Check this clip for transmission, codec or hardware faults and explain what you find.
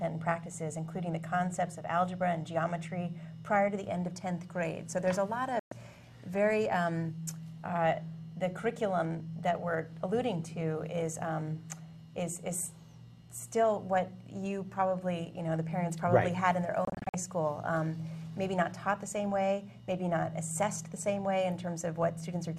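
Two digital broadcast dropouts occur, at 5.59 to 5.72 s and 16.85 to 17.14 s. In both, the receiver stopped getting decodable frames, through signal loss or failed checksums, and muted its output until clean frames resumed. The first is a single 120 ms hole, which fits about five lost frames. The second is a cluster of short gaps scattered over 288 ms, none longer than 48 ms, with 168 ms of audio missing in total. Whatever was broadcast during those gaps is simply gone.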